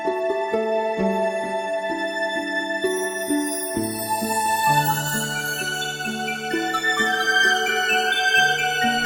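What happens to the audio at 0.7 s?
Nothing goes wrong at 0.7 s; the audio plays through that moment intact, with no dropout, click or distortion.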